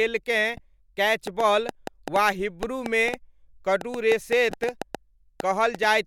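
Corrupt frame decoded, 0.54 to 0.60 s: a short chirp-like burst cuts across the speech for about a couple of compressed frames. Damaged bits in those frames were still decoded, so misread gains and codes placed energy at the wrong frequencies. The result is a brief squeak of error peaking near -30 dBFS. The same fault returns at 4.50 to 4.53 s, this time spanning a few frames, with a similar blip at a similar level.

Train of clicks, 1.27 to 5.85 s: roughly twenty near-identical pulses tick over the speech and through its pauses. They average about 4.6 per second but arrive at an uneven pace. They stand out strongly, some 15 dB above the surrounding sound, which makes them sharp pops rather than a faint tick. The repeated shape points to an outside source injecting the same pulse again and again, likely electrical interference or a faulty connection or power supply.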